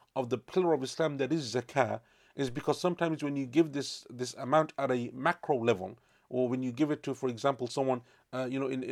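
A DC step at 2.49 s breaks into this speech clip as a single low thump. At that instant the waveform's zero line jumps suddenly by about -40 dBFS, as happens when a converter recalibrates or an input carrying an offset is switched in. The offset then drains away slowly through a high-pass around 2 Hz, so only the abrupt edge is heard, while the speech itself carries on unchanged.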